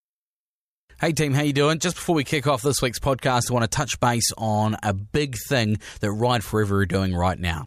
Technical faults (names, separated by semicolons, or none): none